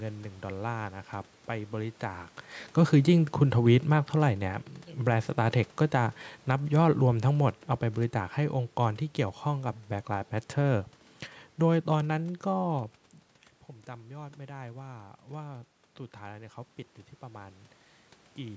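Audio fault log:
6.35–9.77 s, automatic gain falling: the gain control judged the input too loud or its background noise too strong and lowered its gain gradually by about 5 dB, so speech and background sink together.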